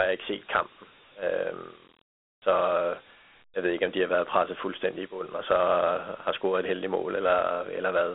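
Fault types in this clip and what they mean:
Dialogic VOX ADPCM: the speech was squeezed through Dialogic (OKI) 4-bit ADPCM at 32 kbps, which fits 8,000 samples a second, after passing a telephone-style band of roughly 250 Hz to 3.5 kHz. Each sample stores only a coarse step from its predicted value, so a gritty hiss rides along with the speech and the codec damage is plainly audible. A spectrogram shows nothing above 3.8 kHz and a grainy noise floor filling in beneath and between the voiced harmonics.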